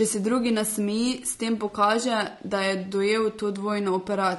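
Throughout the speech, a rough, grainy texture with noise filling between harmonics, likely low-delay AAC compression near 32 kbps.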